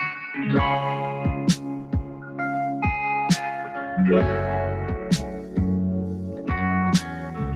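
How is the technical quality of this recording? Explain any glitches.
The recording is compromised by processing rather than by noise: a speech noise suppressor has been left active on non-speech sound, and it repeatedly pulls down parts of the audio it mistakes for noise.

Throughout the clip, the noise suppressor applied to music or sounds keeps reclassifying steady and decaying material as background, so its gain swings by around 10 dB. Onsets pass while sustained parts and tails are ducked, giving a pumping, fluttery character. On a waveform the envelope breathes unevenly. On a spectrogram, sustained bands fade and return in patches instead of holding steady.

The sound is cut by the noise suppressor at four points. From 1.56 to 2.39 s the level dips by about 8 dB. Shorter dips follow at 5.41 to 5.57 s and 6.3 to 6.5 s, each about 6 dB, and from 7.01 to 7.4 s there is a dip of about 5 dB. 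Each time, the suppressor judged the material noise-like and attenuated it harder, so held or fading sound sinks or ends abruptly. These show as hollowed stretches in the waveform envelope and as darkened, truncated regions on a spectrogram.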